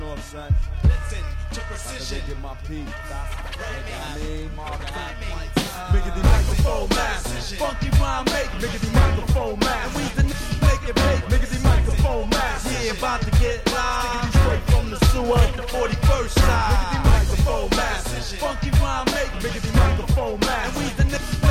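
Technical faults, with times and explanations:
No technical faults are detectable anywhere in the signal.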